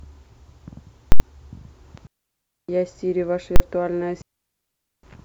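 Invalid numbers at full scale hit at 1.12 to 1.20 s: a calculation in the processing chain produced infinite or invalid values, which were clamped to the maximum sample level for 80 ms, so the speech is replaced by a hard, very loud pop. A digital wireless dropout follows at 2.07 to 2.69 s, where the receiver lost too much of the link's data and muted for about 0.62 s, leaving a clean hole of near silence with no noise burst at either edge. The invalid numbers return at 3.56 to 3.60 s, a shorter 40 ms block heard as a single bang. A second dropout at 4.22 to 5.03 s blanks the speech for about 0.81 s in the same quiet, abrupt way.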